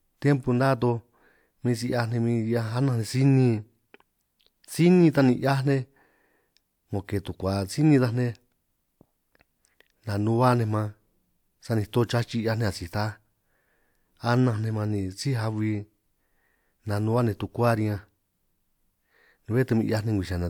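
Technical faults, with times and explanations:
Nothing in this speech recording stands out as a technical problem, so there's nothing to flag here.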